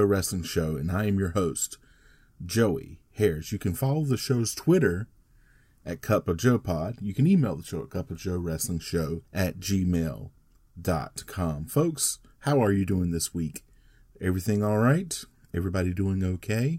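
Listening closely to the speech turned up nothing that stood out as a technical problem at any point.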